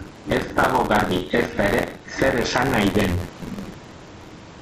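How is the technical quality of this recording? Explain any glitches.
The recording has two faults that run through the whole clip: gain pumping and buffer tearing. The speech also stops at about 7 kHz, which is consistent with the G.722 call path. The room noise sits about 37 dB below the speech.

Gain pumping is present from start to finish. The level swing is roughly 15 dB. Loud and soft passages come out close in level, so the speech sounds squashed. The likely cause is a microphone gain set far too high, with a fast limiter or compressor pulling it down on every peak and releasing it in the gaps.

Buffer tearing also runs through the whole clip. A robotic buzz at 86.1 Hz sits on the speech and disappears in the silences. That rate fits a 512-sample buffer. The writer and the reader of the ring buffer have drifted until they cross inside every period. About a fifth of each buffer then plays audio from around 50 ms earlier. 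Hard joins on both sides of that stale chunk produce the rattle.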